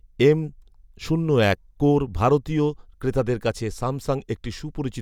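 No faults can be heard anywhere in this recording: no dropouts, clicks, distortion or timing breaks.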